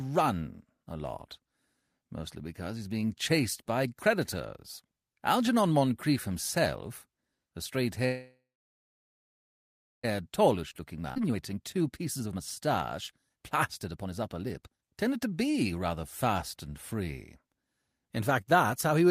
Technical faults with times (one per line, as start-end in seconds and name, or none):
8.05-10.05 call audio freeze
10.23-16.29 jitter buffer speed-up
11.14-11.18 skip ahead